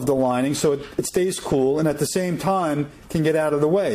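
At 1.09, 2.07 and 3.06 s, overlap between stream segments trims a few milliseconds at each one-second segment boundary. The waveform jumps, giving regular tiny skips.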